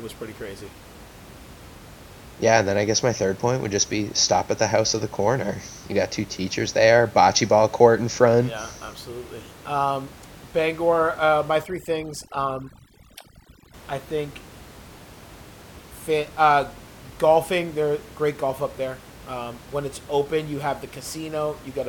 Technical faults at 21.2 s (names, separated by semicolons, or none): none